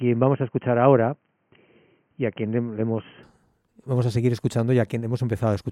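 From the start to 3.23 s the speech is dull and boxy, with nothing above 3.2 kHz, then it opens up abruptly with no gap and no jump in loudness. That points to an input switched to a poorer device, likely a headset call profile handing back to the main microphone. Unlike a codec lowering its bandwidth, the change is a clean step, and the narrow section carries its own faint background noise, about 50 dB under the speech.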